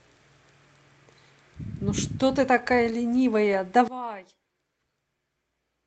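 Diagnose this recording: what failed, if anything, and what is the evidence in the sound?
Lost packet rebuilt from error correction, at 2.57–2.59, 2.91–2.93, 3.13–3.15 and 3.53–3.55 s, at the network stage. Each 20 ms stretch of speech comes through rougher and noisier than its surroundings, yet without any gap. A packet went missing each time, and the decoder filled the hole with the reduced-quality copy carried in the following packet (Opus in-band redundancy), so continuity holds while detail drops. The surrounding codec sound, band-limited at 8 kHz, fits a call stream of about 32 kbps.

One channel inverted, from 3.88 s to the end, most plausibly in the wiring or channel-routing stage. At 3.88 s the speech suddenly falls by about 20 dB and turns faint, and it stays that way to the end. This is likely one stereo leg with reversed polarity. When the two channels are summed, the centred speech and background they share cancel, and only the small difference between them survives.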